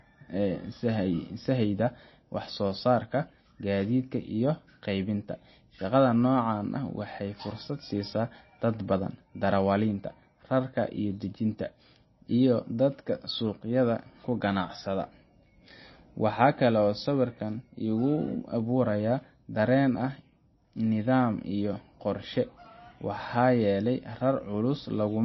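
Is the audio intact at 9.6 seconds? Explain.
No. At 9.6 seconds the speech carries the MP3 compression damage that runs through the whole clip. Nothing sounds above 5.8 kHz, and the remaining band has a watery, swirling quality with smeared consonant onsets. This is likely from an encoder starved of bits, which fits a stream of about 24 kbps. It cuts the treble and drops weak frequency lines that flicker on and off between frames. A plain low-pass filter would remove the top without that shifting, swirly texture.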